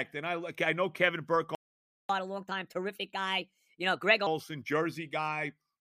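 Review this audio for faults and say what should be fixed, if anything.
At 1.55 s the speech just drops out, and nothing comes back until 2.09 s, so you get a dead gap of about 0.54 s right in the middle of the flow. That's a playback stall: the output went silent because the player had nothing to send, most likely because its buffer ran dry or its audio thread got blocked for that half second. It picks up again afterwards. Giving the player a deeper buffer and keeping its audio thread free of blocking work would stop this.

Right after it resumes at 2.09 s, the speech rushes. It runs at 1.25 times normal speed until 4.27 s, and the pitch rises by roughly four semitones, so it sounds noticeably chipmunky for about two seconds before settling. That's catch-up at higher speed: the player is resampling its backlog to recover the time lost in the stall, which speeds up and raises everything together. 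Using time-stretching that preserves pitch, or catching up more gently over a longer stretch, would hide this.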